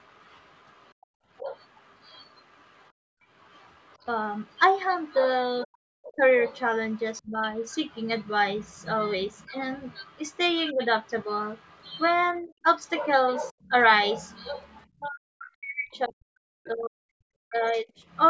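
From the start to about 16.7 s, a second voice sits faintly under the speech. This is the other side's voice leaking through, roughly 25 dB below the main talker. The far end is played on a loudspeaker, and the echo canceller has likely failed to strip all of it from the microphone.

From 0.99 to 1.44 s comes the first case of speech suppressed in double talk. Both sides are talking at once. The canceller likely cannot tell its own talker from the echo, so it turns everything down. The speech dips by around 30 dB, for roughly a tenth of a second in total.

From 2.92 to 3.24 s, the background is gated by the echo canceller. While the loudspeaker plays, the microphone is pulled down hard, by about 40 dB. For about 0.3 s the room sound drops away, leaving a dead gap. It returns when the canceller releases.

The same double-talk suppression recurs from 5.64 to 7.42 s, from 10.72 to 10.81 s, and from 12.4 to 18.01 s. 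The deepest dips reach around 40 dB. The shortest lasts about a tenth of a second. The last one chops the speech for around three seconds in all. The voice fades, thins and cuts out in pieces. Throughout, the call's microphone processing limits the band, with nothing above 8 kHz.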